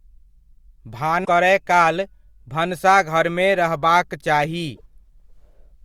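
At 1.21 to 1.29 s, just before "करय काल भनसाघरमे रहबाक", damaged data in the compressed stream makes the decoder misread frames and lose sync. The result is a short glitch lasting about 70 ms.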